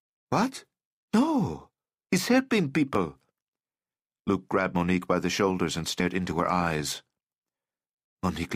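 At 2.95 s and again at 4.75 s the audio skips forward, losing around 10 ms and then about 40 ms. The likely cause is a dropped buffer (overrun), with capture falling behind so that overwritten samples are lost and the surrounding audio is joined directly, without any gap. At 6.00 s there is a brief stretch of damaged data in a compressed stream, where the decoder misreads corrupt frames, loses sync and resumes at the next valid header. At 6.31 s the same overrun skip recurs, again dropping roughly 10 ms.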